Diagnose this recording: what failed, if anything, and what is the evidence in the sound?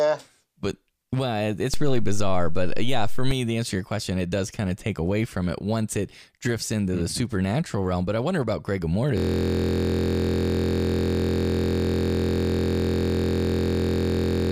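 DC step at 1.74 s, just after "but well", with a low thump there and again at 3.31 s before "the answer to your", as the converter's zero line shifts and returns.

System hang loop from 9.18 s to the end: a 23.22 ms slice repeats as a steady 43.1 Hz buzz while the driver froze, which fits a 1024-sample ring buffer.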